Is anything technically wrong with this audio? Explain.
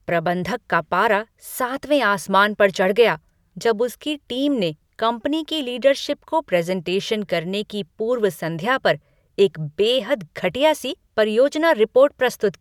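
No, nothing is technically wrong with this audio.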